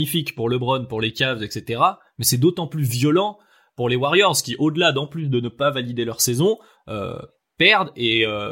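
No technical faults can be heard anywhere in this speech recording. Nothing in the audio calls for a timestamp or a description of something going wrong.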